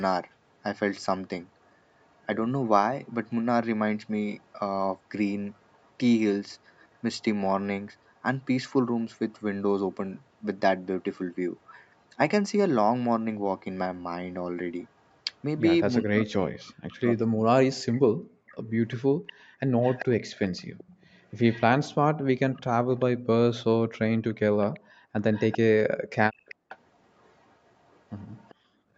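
A faint second copy of the speaker trails about 0.39 s behind the speech from 1.64 to 8.19 s, again briefly from 14.82 to 15.16 s, and then much more clearly from 18.49 to 23.05 s and from 24.74 s to the end. Early on this echo leak sits very low, around 40 dB under the speech, but later it rises to about 20 to 25 dB below it. The likely cause is a loudspeaker on the far end whose echo canceller let part of the returning audio slip back into its microphone. Between 16.01 and 18.04 s the speech itself sinks and breaks up in pieces, for roughly a second and a half in total, with the deepest dips close to 40 dB. That is speech suppressed in double talk, most likely because both sides were talking at once and the canceller, unable to separate the local voice from the echo, pulled everything down. The room tone also drops away for short moments, by up to about 35 dB between 18.32 and 19.6 s, and by about 34 dB between 24.8 and 26.69 s and again between 28.55 and 28.94 s. 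This background gating by the echo canceller happens while the loudspeaker path is active, as the canceller clamps the microphone and then releases it, and the ambience returns each time. Throughout, the sound stops at about 8 kHz, consistent with the Opus call path.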